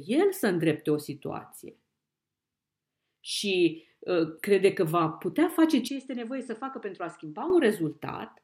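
At 5.88 s, right after "că va putea face", the speech abruptly drops about 10 dB and turns duller, with nothing above 8.9 kHz and a faint new noise floor, until 7.50 s. This points to the input likely switching to a poorer device, with no gap at the switch.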